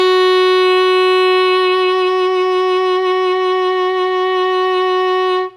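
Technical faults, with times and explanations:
Nothing stood out on listening to this music clip.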